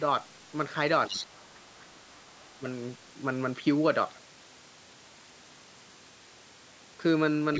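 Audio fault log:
1.07–1.25 s, other side's voice leaking through: a faint second voice, roughly 10 dB below the talker, likely loudspeaker echo the echo canceller left in the microphone signal.
1.09–2.66 s, speech suppressed in double talk: the talker's level dips, falling by up to about 25 dB over roughly 1.5 s in total, likely because the echo canceller attenuated both sides while they overlapped.
7.54–7.59 s, other side's voice leaking through: a brief scrap of a second voice, about 15 dB below the talker, likely residual loudspeaker echo that the canceller did not remove.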